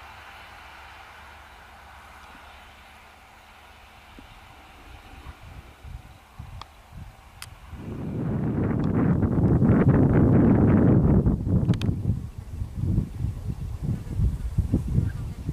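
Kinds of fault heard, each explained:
No technical fault is audible anywhere in the recording.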